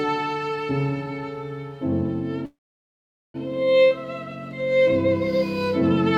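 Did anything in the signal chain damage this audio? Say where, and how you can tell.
Yes: a call audio freeze from 2.45 to 3.36 s, at the network stage. For about 0.89 s the last sound is stretched into a brief fading buzz that falls to near silence for roughly 0.81 s. The audio then resumes exactly where it broke off, with nothing skipped, so everything after 3.36 s runs about 0.89 s late. That pattern points to packets likely held up in transit, leaving the receiver's jitter buffer empty until they arrived.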